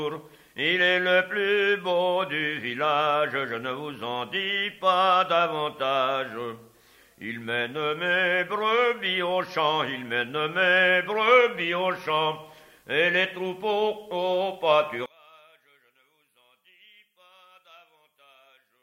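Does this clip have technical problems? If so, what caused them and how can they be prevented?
Yes. From 15.06 s to the end the sound suddenly drops by about 33 dB, with almost everything gone. That's likely one channel inverted: with its polarity flipped, everything shared between left and right cancels in the mono sum, leaving only the faint difference between them. To prevent it, check the polarity on both channels and run a quick mono-sum test before export.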